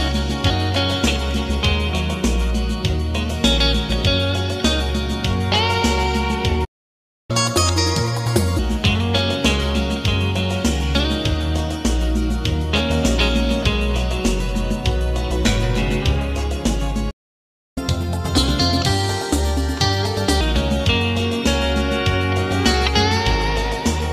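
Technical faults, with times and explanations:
6.64 to 7.31 s and 17.10 to 17.78 s, playback stall: the sound cuts out mid-flow into silence for about 0.64 s and 0.66 s, then resumes where it stopped, likely because the player ran dry or its thread was blocked. This is unlike a dropout, because nothing is skipped.
7.31 to 8.59 s and 17.78 to 20.41 s, catch-up at higher speed: straight after each stall the audio runs fast, at 1.5 times speed and roughly seven semitones higher, then at 1.25 times and about four semitones higher. Pitch and tempo rise together because the backlog is resampled, which sets it apart from a pitch-only error.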